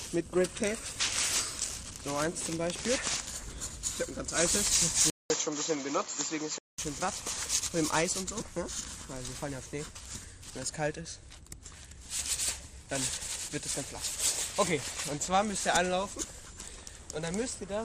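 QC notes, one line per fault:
5.1–6.78 s, input switched to a poorer device: after a gap of about 200 ms the sound turns duller and boxier, with nothing above 7.6 kHz, and a new faint background noise appears, about 40 dB down, while loudness stays roughly the same. The likely cause is capture moving to another microphone or a headset's call profile. The silent gap and the changed noise floor set it apart from a simple filter or codec bandwidth drop.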